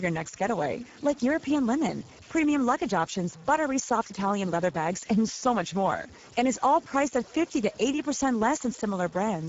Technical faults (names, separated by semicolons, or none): low bit depth without dither; Speex codec